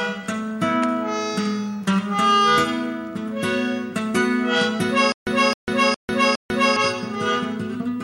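From 5.12 to 6.76 s the music breaks into a stutter with silent gaps. A fragment about 264 ms long plays, then about 147 ms of dead digital silence follows. The same burst returns every 411 ms, four times in all. The likely cause is a stalled player or stream that replayed its last buffered fragment at each retry before running empty. The music that belonged in that span never plays.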